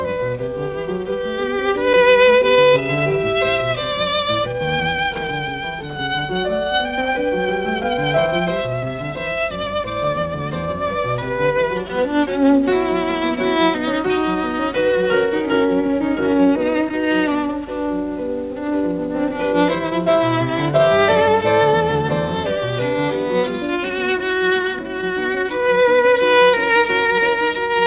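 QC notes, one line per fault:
No faults to note; the audio comes through a G.711 call path working as expected, with nothing above 4 kHz.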